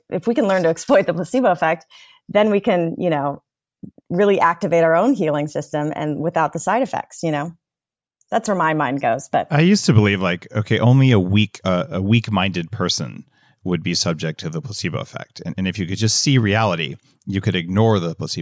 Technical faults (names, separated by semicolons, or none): none